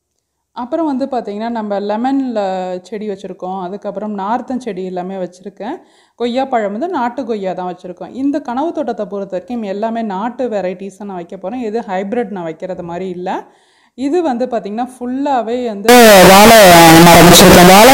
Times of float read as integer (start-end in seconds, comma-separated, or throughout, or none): 15.89-17.93